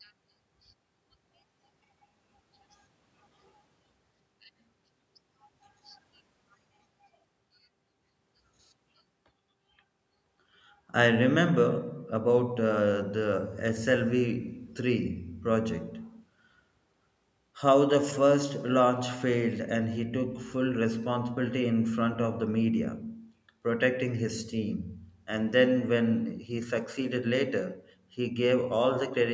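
Nothing stood out on listening to this speech; the only thing to note is the usual call microphone processing, which trims the lowest bass and leaves nothing above 8 kHz.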